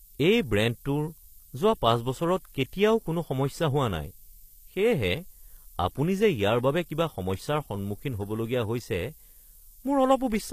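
From start to finish a steady, thin hiss sits under the speech, brightening sharply toward the top of the band and lying only around 20 dB below the speech itself. This is low bit depth with noise shaping: the samples are stored with very few levels, which fits 8-bit quantisation, and the rounding error is steered upward in frequency, so it gathers as a bright, constant hiss rather than a broad, even noise.

Also throughout, the sibilants sound gritty and metallic, with a lispy edge, and the top end feels synthetic rather than natural; nothing is present above about 14.9 kHz. The likely cause is HE-AAC compression at a low rate, consistent with about 24 kbps. Only the lower spectrum is properly coded, and the treble is rebuilt from copied lower bands under a coarse envelope, so its harmonics fail to line up with the real ones.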